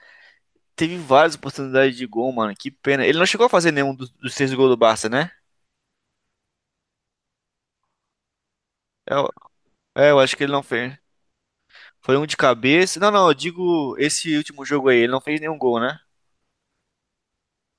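No technical faults can be heard anywhere in the speech recording, and the signal stays steady and intact throughout.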